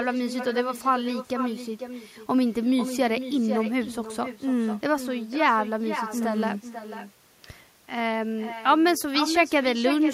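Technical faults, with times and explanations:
Throughout: echo with no canceller. The far end is playing the call over a loudspeaker, and its microphone picks that playback up again. Nothing at that end subtracts it, so the sound travels back across the network. Every phrase of the speech is followed about half a second later by a copy sitting about 10 dB below it. The copy sounds thinner because it has passed through a loudspeaker.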